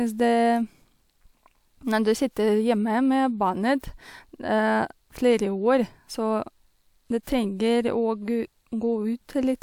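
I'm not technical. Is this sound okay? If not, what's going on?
Yes, this one sounds fine, with nothing in it that needs fixing.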